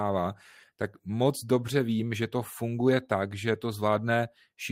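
No technical faults can be heard at any point in the recording, so there is nothing to describe in time order.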